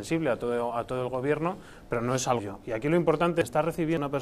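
At 2.39 s and 3.42 s, then 3.97 s, compressed frames are skipped: the decoder drops whole 92.9 ms frames and the audio jumps ahead, roughly 0.7 s, 0.7 s and 0.3 s, which points to several missing frames.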